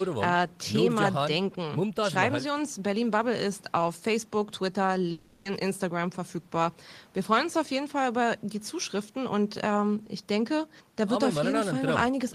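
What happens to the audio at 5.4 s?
At 5.4 s the speech breaks into a fading buzzy hiss that runs from 5.11 to 5.47 s, with no true silence, before the voice resumes with about 340 ms missing. This is likely a long network dropout, where the receiver stretched the last sound to cover audio that never arrived.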